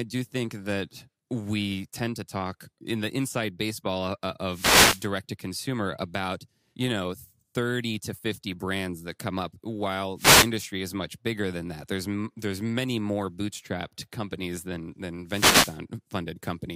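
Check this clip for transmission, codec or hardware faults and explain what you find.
The speech carries three wireless microphone noise hits, at 4.48 to 5.08 s (after "baseball of uh", before "to consumer about you"), 10.16 to 10.51 s (after "that come up while", before "is much bigger than"), and 15.26 to 15.80 s (after "bootstrapped companies than than"). In each, the analogue FM radio link fades as reflected signals cancel at the receiver, so its noise floor rises for roughly a third to six tenths of a second. The result is a brief swish of static over the speech.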